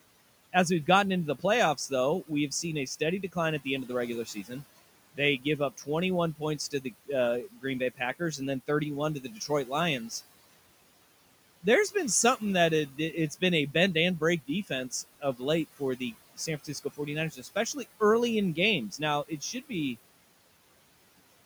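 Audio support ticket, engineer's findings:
Noise suppressor artifacts, whole clip: background pulled down about 18 dB between phrases, swelling back under speech. Probable component: noise suppressor applying per-band, frame-by-frame gain. Room noise sits about 19 dB below speech.

Speech cut by the noise suppressor, 0.53–4.51 s, 5.13–10.11 s, 11.63–18.01 s (ending before "early in"), 18.55–19.71 s (after "early in"). Quiet speech treated as noise, ducked up to about 13, 17, 16, 11 dB over roughly 0.4, 1, 0.7, 0.2 s. Fade-out at 20 s.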